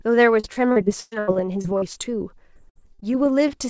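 From 0.40 to 1.98 s there is repeated packet loss, producing a robotic sound: ten gaps, about 420 ms missing in total, the longest 116 ms. Each hole is bridged by extending the preceding sound, so about a quarter of that stretch is synthetic and choppy.

The same repeated packet loss returns from 2.54 to 3.11 s, with five gaps, the longest 59 ms, and roughly 28 percent concealed. The stuttering, choppy texture recurs, with fragments of the audio dropping out between patched segments.

At 3.48 to 3.52 s a short concealed packet loss removes about 20 ms. The receiver continues the last sound briefly and blends back in, leaving a small smear or wobble. The call path itself carries nothing above 8 kHz, consistent with a wideband codec such as G.722.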